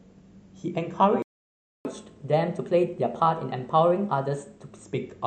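A speech recording, the player most likely ran short of data or had its thread blocked, causing a playback stall: the output drops to silence at 1.22 s and stays silent for about 0.63 s, until 1.85 s, with the speech cut off mid-flow before resuming where it stopped. To recover the lost time, the player then resamples its backlog for catch-up at higher speed, running at 1.1 times normal rate from 1.85 s to 4.85 s, so the speech sounds hurried and raised in pitch by roughly one and a half semitones before settling back to normal speed and pitch.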